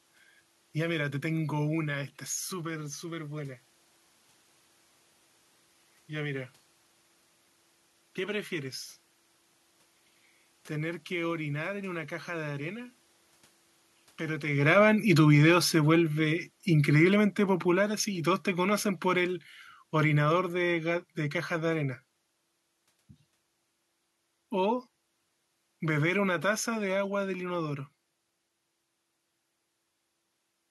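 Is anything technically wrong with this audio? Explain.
Yes. There's automatic gain falling from 14.48 s to 21.83 s. The AGC judged the input too loud, or its background noise too strong, and eased its gain down by about 10 dB, so voice and room noise sink together.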